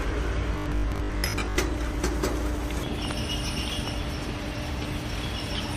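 From 0.54 to 1.58 s, a robotic sound, likely from repeated short buffers: roughly half the audio is replaced by repeated 20 ms segments, producing a rigid 50 Hz buzz.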